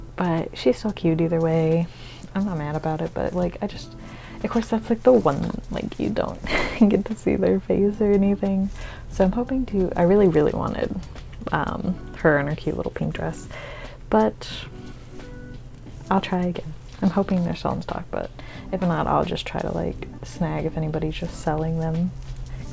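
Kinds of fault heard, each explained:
No faults can be heard in this clip. It carries the marks of a WebRTC call path using G.722, with nothing audible above 8 kHz.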